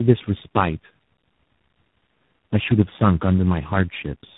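Tandem speech coding throughout: rough, muffled, warbly speech with nothing above 3.8 kHz, which fits three low-rate codecs each re-encoding the previous one's damage.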